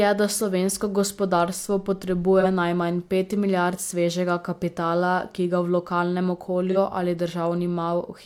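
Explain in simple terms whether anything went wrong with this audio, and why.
At 2.40 s and 6.71 s, AAC frame loss with concealment causes 43 ms smeared blips: the decoder rebuilt a missing chunk from the sound just before.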